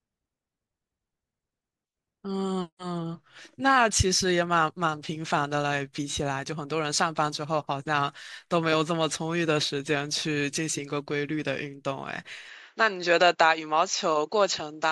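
A speech clip. At 12.49 s the sound abruptly narrows and runs that way to the end. Nothing reaches above 7.6 kHz, and a new background noise sits about 45 dB under the voice. Level holds steady, with no gap at the change. The likely cause is an input switched to a poorer device.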